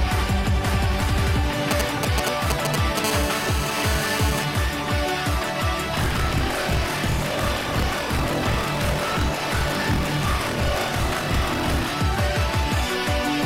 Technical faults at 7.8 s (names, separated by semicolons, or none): buffer tearing